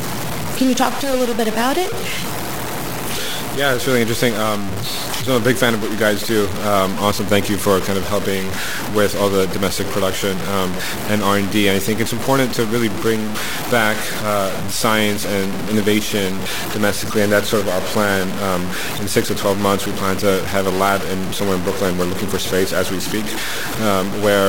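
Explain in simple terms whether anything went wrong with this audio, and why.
Something did go wrong, and it lasts for the whole recording. The speech sounds grainy and rough from start to finish, with a harsh fizz that follows the voice and shifts as it gets louder or softer. The quietest moments break up into sputtering or drop out. This is most likely low bit depth without dither: the sound was stored with only about 4 bits, so every level was cut down to a few coarse steps.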